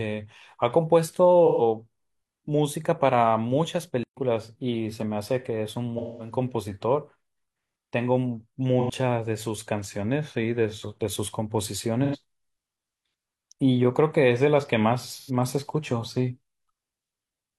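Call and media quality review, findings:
AAC frame loss with concealment at 1.46–1.62 s, 5.98–6.32 s, 8.80–8.90 s, 12.04–12.16 s and 15.14–15.30 s. Brief smeared, noisy, phasey patches in the speech, roughly 85 to 213 ms each, which fits runs of two to five lost frames. The decoder rebuilds each gap from the last good spectrum. Spectrogram: harmonics blur into noise-like fill. Waveform: envelope stays continuous, with no hard gap.

Playback stall at 4.03–4.17 s. Speech cuts out mid-flow for about 133 ms of silence, then resumes. Likely the player buffer running dry or the output thread being blocked. Waveform: flat, near-silent gap. Spectrogram: a clean blank vertical band across all frequencies.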